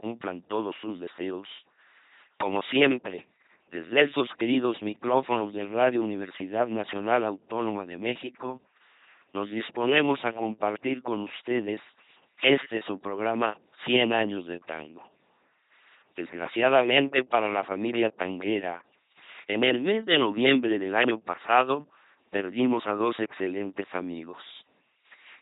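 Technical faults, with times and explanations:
Throughout, LPC-10 vocoder: the speech comes out as a heavily damaged, buzzy robot voice with nothing above 3.8 kHz, which fits a 2.4 kbit/s coder. Each moment is rebuilt from either a pulse train or noise through a small filter, so buzz and hiss replace natural voicing.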